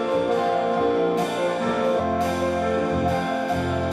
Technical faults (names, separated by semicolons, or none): skip ahead